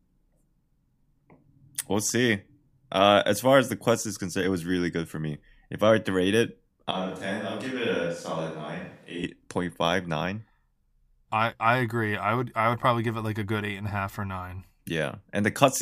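From 6.91 to 9.23 s, after "were to rate it", the speech abruptly turns roomy, hollow and thinner in the bass, about 5 dB quieter, snapping back at "point five nine". A likely switch to a distant microphone: a simple gain dip wouldn't add room sound.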